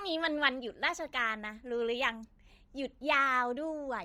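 The speech has most likely been through Bluetooth LC3 compression for its whole length, with heavy codec damage that fits a low bitrate of around 32 kbps and 10 ms frames. The encoder has too few bits for the upper spectrum, so much of it is dropped and filled in with synthetic noise. The result is a breathy, grainy edge on the voice throughout, with sibilants and airy detail turned to hiss rather than clean treble.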